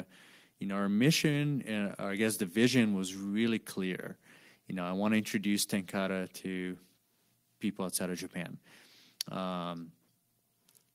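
No technical faults are audible anywhere in the recording.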